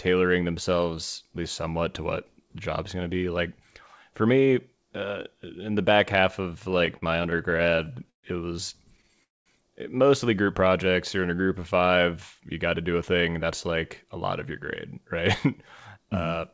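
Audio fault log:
6.64–8.25 s, repeated stalls (stutter): Packets kept arriving late, so the jitter buffer ran dry again and again between "the back half of" and "it was". Each time, the receiver held the last sound going until data arrived. There are 17 short stalls in this stretch, the longest 132 ms, adding about 352 ms in total with nothing lost. Roughly a fifth of the passage is filled-in sound, so the speech catches and drags in small jerks.
9.23–9.48 s, call audio freeze: The likely cause is a burst of packets held up in transit, emptying the jitter buffer. The receiver stretched the last sound briefly, then fell to about 210 ms of silence before playback resumed. A gap of about 220 ms is dropped in between "it was" and "mostly group", and nothing is cut. From that point the call runs about 220 ms further behind.
10.64–11.88 s, jitter buffer slow-down: With its reserve low, the receiver rebuilt it by repeating single pitch periods and slivers of pause many times over, adding 143 ms. 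From "mostly group" up to "you got to do", the speech plays at about 89% speed with its pitch unchanged. Syllables sound drawn out and slightly sluggish, though the voice's pitch does not drop.
13.67 s to the end, jitter buffer speed-up: Once more audio had piled up than the buffer aims to hold, the receiver trimmed it by cutting out short pieces of one or a few pitch periods in quick succession. About a tenth of a second was removed in total. The speech runs at about 104% speed at the same pitch. Throughout, the G.722 call codec leaves nothing above 8 kHz.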